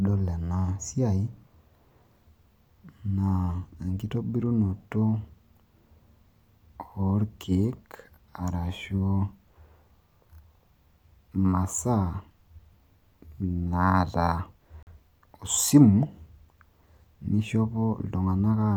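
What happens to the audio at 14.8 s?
At 14.83 s the speech cuts to silence in a digital broadcast dropout, returning at 14.91 s. The receiver stopped getting usable data, either because the signal was lost or because a frame failed its checksum, and it muted its output until valid frames resumed. The gap of roughly 43 ms of missing programme fits the loss of a single frame. Whatever was transmitted in that interval is gone, so the sound resumes further along rather than picking up where it stopped.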